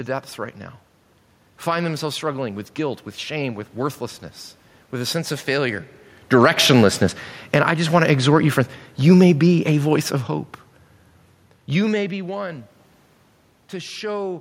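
Automatic gain falling, from 6.18 to 10.56 s, pulls this speech recording down by about 7 dB. The automatic gain control judged its input too loud, or its background noise too strong, and eased its gain lower over those four seconds, so the voice and the room noise behind it sink together, which is how it differs from a talker simply moving away. The genuine shifts in distance from the microphone, around 6 s and again near 11.5 s, change only the voice's level against that steady background.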